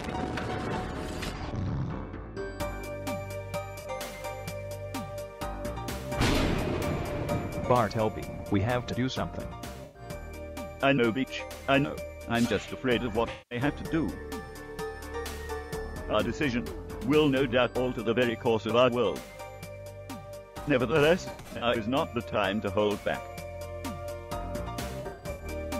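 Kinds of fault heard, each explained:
AAC frame loss with concealment: stretches of the coded stream go missing, and the decoder fills each gap by reusing the last good spectrum, so the sound smears into a noisy, phasey patch instead of cutting out. Losses last about 43 ms at 3.8 s, 107 ms at 9.84 s and 192 ms at 13.32 s, with scattered clusters across 21.32–21.67 s and 25.01–25.45 s. A spectrogram shows blurred, frozen-looking blocks; the waveform loses its fine detail there.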